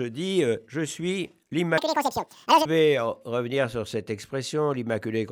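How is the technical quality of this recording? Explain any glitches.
The recording has one glitch, a section at the wrong speed from 1.78 to 2.65 s. That stretch runs at double speed, likely because it was resampled or played against the wrong clock, so it sounds hurried and roughly ten semitones higher. On a spectrogram its harmonics jump upward and events are squeezed closer together in time.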